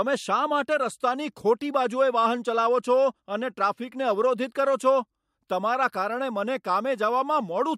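From the start of the speech through about 4.76 s there's channel delay, a mild case of comb filtering. One channel runs behind the other by roughly a single sample, a tiny fraction of a millisecond. Summed to mono, that puts the first cancellation notch right up near 20 kHz, so instead of obvious hollowness you get a gentle dulling of the extreme top end, a slight loss of air and sheen until it clears.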